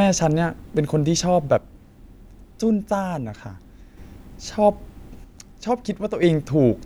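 From 1.58 to 3.98 s, and again from 5.24 to 6.23 s, the speech abruptly drops by about 6 dB and then returns, which likely points to one channel dropping out. Once the stereo pair is summed to mono, a single surviving side carries only half the shared signal.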